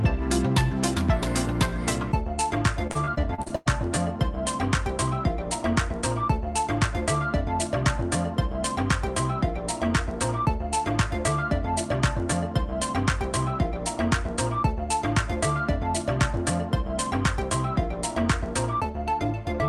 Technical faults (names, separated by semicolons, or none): repeated packet loss (robotic sound)